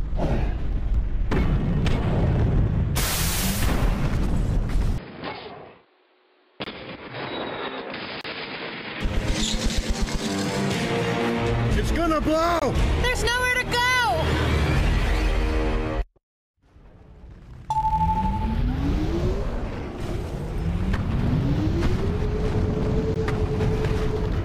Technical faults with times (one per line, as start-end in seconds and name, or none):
4.98-9.01 input switched to a poorer device
6.64-6.66 block of digital silence
8.21-8.24 block of digital silence
12.59-12.62 block of digital silence
23.14 block of digital silence